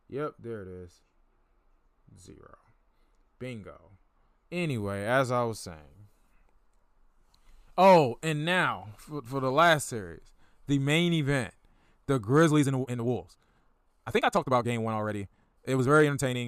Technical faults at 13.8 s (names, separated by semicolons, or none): time-stretched section